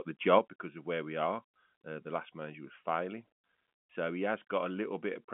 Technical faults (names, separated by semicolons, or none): sudden gain jump